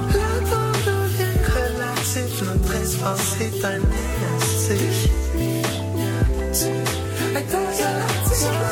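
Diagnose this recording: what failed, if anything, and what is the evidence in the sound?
Nothing in this music recording points to a failure at any stage of the chain. There is no event in the sound that would implicate the wiring, conversion, buffering, transmission, storage or playback.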